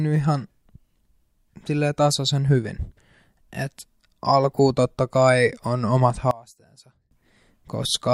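Right after "totta kai on omat", from 6.31 to 7.11 s, the speech falls by about 25 dB to a faint residue. The likely cause is one channel inverted: one side's polarity is reversed, so the shared centre content cancels in the mono sum, leaving only the small inter-channel difference.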